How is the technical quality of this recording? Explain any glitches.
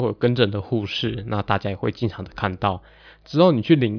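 No technical faults can be heard in the recording, so there are no glitches to explain. Nothing in the speech stands out as a technical problem.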